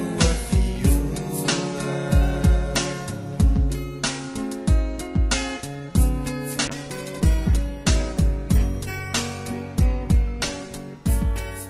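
At 6.68 s a call bitrate drop begins: the call's bandwidth estimate fell, and the encoder was told to spend far fewer bits, a change that fits a fall from around 128 kbps to about 20 kbps. The lowest rate holds for the last 4.01 s, so the coarser coding, with its high-frequency cut-off, leaves the sound rough, watery or muffled and never clears before the clip ends.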